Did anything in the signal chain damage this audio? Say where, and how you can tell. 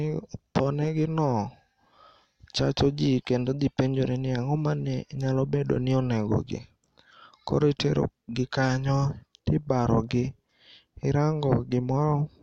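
No, nothing in the chain audibly damaged this speech recording; the signal stays continuous and intact, with no stage leaving a trace that can be heard.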